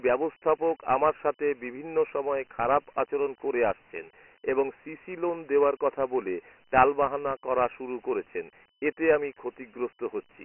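A gritty hiss trails the speech throughout, with nothing above 3 kHz: Dialogic VOX ADPCM coding, whose band edge points to 4-bit samples at 6,000 per second.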